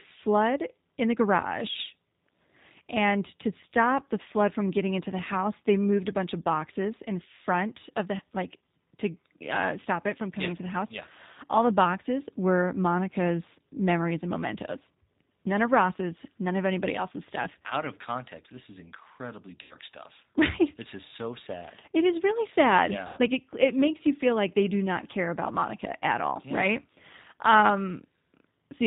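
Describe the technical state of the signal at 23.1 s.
At 23.1 s the voice path has lost about 100 ms of packets, between 23.07 and 23.19 s, which fits five 20 ms packets going missing. This is VoIP packet loss concealed by the speech codec: with nothing arriving, the decoder keeps running its last pitch period and vocal tract filter while turning the gain down frame by frame. The speech therefore smears into a buzzy tone or coloured noise that fades out, and because each frame is predicted from the one before, the voice comes back weak or distorted for tens of milliseconds or more after 23.19 s.

Underneath that, the whole signal is carried by the G.729 codec, here G.729A at 8 kbit/s. It rebuilds speech from a filter model of the vocal tract, a pitch predictor and a few pulses per frame, and passes nothing above 4 kHz. At this moment that means a band-limited, plainly rough and synthetic timbre. 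The concealment sound is built from that same model.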